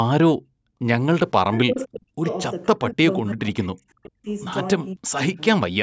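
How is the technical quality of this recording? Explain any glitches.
The recording has two recurring glitches, both typical of a hands-free call where both ends talk at once. The audio also shows ordinary call microphone processing, with nothing above 8 kHz.

Speech suppressed in double talk occurs at 1.35–2.27 s, 2.73–3.06 s, 3.22–4.28 s and 4.94–5.4 s. The speech drops sharply, by up to about 40 dB. This is likely the echo canceller mistaking the talker for loudspeaker echo while the far side spoke. Unlike a network dropout, it ducks the sound rather than leaving clean silence.

Echo leak appears at 2.29–2.34 s and 3.62–3.68 s as brief, faint scraps of sound far below the main speech level. They are delayed copies arriving about 515 ms late, probably residue the far end's canceller failed to remove. Unlike reverberation, they repeat earlier sound after a distinct gap instead of smearing the current sound.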